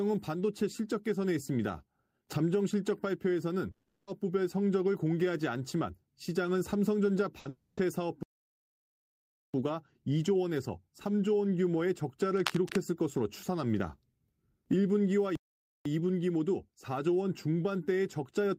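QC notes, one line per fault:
3.71–4.09 s, long network dropout: the speech breaks off and the last sound is carried on as a fading buzz for about 360 ms, the final 80 ms of it near-silent, before speech resumes further along with that stretch missing. This is likely a network outage where nothing arrived and the receiver concealed the gap. On a spectrogram the harmonics smear into flat horizontal bands that dim to a dark strip, and the waveform tapers to almost nothing before the speech resumes.
7.39–7.47 s, burst of packet loss: a short gap of about 60 ms where the preceding sound is held and turned down, then speech picks up later with that slice gone. Several consecutive packets were lost or arrived too late, and concealment stretched the last frame across the hole. On a spectrogram it shows as a brief frozen, fading smear; the waveform shows a small tapering patch.
7.49–7.79 s, long network dropout: straight after the burst, a longer concealed gap of about 280 ms, the held sound fading and only about 10 ms reaching silence, and the speech then jumps ahead with that portion lost. 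Coming right behind the packet burst, this points to a likely run of network trouble rather than a single lost packet. The spectrogram shows stretched, flattened bands dimming out; the waveform decays smoothly, with no speech structure in it.
8.23–9.54 s and 15.35–15.85 s, playback stall: the output cuts to silence mid-flow, for about 1.31 s the first time and about 500 ms the second, then the sound continues. There is no fading tail this time, just an abrupt stop, which fits the player likely running out of data or its thread being blocked. On a waveform both appear as flat, near-silent stretches with hard edges; on a spectrogram, as fully dark vertical gaps.
12.36–12.80 s, cable scratch noise: for roughly 0.44 s a dense, uneven scratching rustle sits over the speech at about 10 dB below it. The rapidly changing contact resistance of a worn cable, connector or control being moved is the likely source. 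The spectrogram shows irregular broadband vertical streaks and speckles across the frequency range, and the waveform carries jagged, spiky bursts riding on top of the speech.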